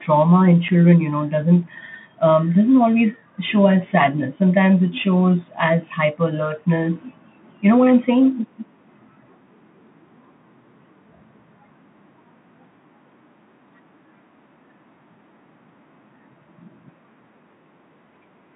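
From the start the speech carries the sound of a Bluetooth CVSD headset codec. The audio is confined to a narrow band of about 150 Hz to 3.5 kHz, and the damage is plainly audible. The codec sends a single up-or-down bit per sample and adapts its step size, which fits a 64 kbps CVSD stream. When loud, bright sounds change faster than the step can follow, they distort. Sibilants turn scratchy and a granular hiss sits beneath the speech.

At 0.68 s there is unconcealed Bluetooth headset packet loss. A couple of voice packets between headset and phone went missing, leaving about 7.5 ms of the signal replaced by silence or an idle pattern rather than smoothed over. The result is a brief hole with hard edges, and the speech resumes quieter for a moment as the CVSD decoder rebuilds its step size.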